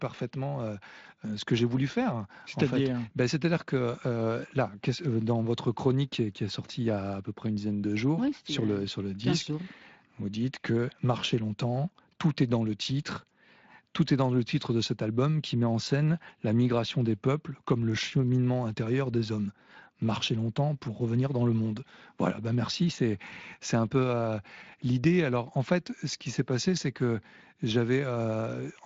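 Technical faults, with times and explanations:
Nothing here needs flagging at all; the speech just comes through its Speex path the way that link is meant to carry it.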